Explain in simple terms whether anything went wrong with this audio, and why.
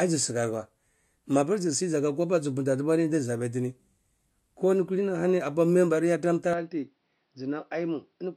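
At about 6.53 s, right after "member yarn am tar", the sound suddenly turns duller and a bit quieter through to the end, with nothing above roughly 5.8 kHz and faint new background noise. That's most likely the input switched to a poorer device, with no gap at the changeover.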